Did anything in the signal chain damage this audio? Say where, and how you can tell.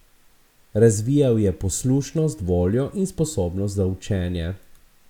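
No, nothing along the signal chain audibly damaged this speech recording; it arrives intact, with no stage leaving a mark that can be heard.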